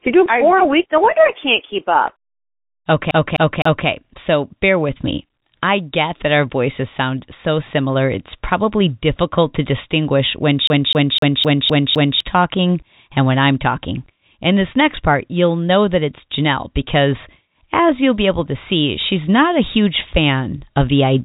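From 3.11 to 3.88 s and again from 10.67 to 12.20 s, the speech, band-limited by its G.711 telephone coding, hits a CD stuck on one turn: the same 0.26 s snippet repeats three, then six times, each jump marked by a brief mute. That rigid, even rhythm separates it from packet-loss repeats, which vary.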